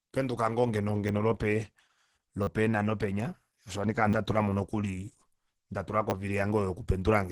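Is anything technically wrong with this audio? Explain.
Yes, there are two problems. Throughout the whole clip, the speech has been squeezed through a low-bitrate codec, most likely Opus compression running in its hybrid speech mode at a rate around 12 kbps. At that rate the encoder cannot keep the fine detail of each band, so it fills them loosely. Nothing is left above 12.2 kHz, and the damage is heavy: the speech sounds muffled and hoarse, with a rough, grainy texture.

There are also four repeated buffer events, at 1.08 s, 2.43 to 2.47 s, 4.1 to 4.13 s and 6.1 to 6.12 s. Each time, fresh audio failed to reach the playback device in time, so it replayed the last short block instead, which fits a 10 ms buffer. The first repeats once and is heard as a click. The later ones loop several times, producing a brief buzzing stutter with hard joins and dropping a few tens of milliseconds of real audio.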